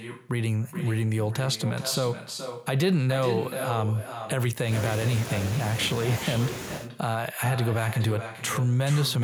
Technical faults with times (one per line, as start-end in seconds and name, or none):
0.00-9.23 echo with no canceller